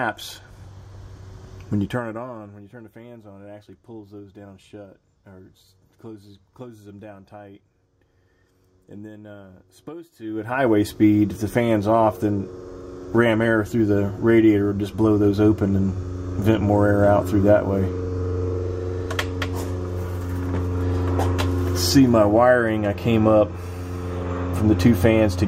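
Zipper noise appears from 1.54 to 2.64 s and again from 10.07 to 10.67 s. In the first stretch the level falls by about 25 dB, and in the second it climbs back by about the same amount. Both moves are made as unsmoothed steps, roughly a hundred per second, so each small jump in gain leaves a tiny click. Together those clicks form a fast, buzzy ticking that rides on the sound only while the level is moving.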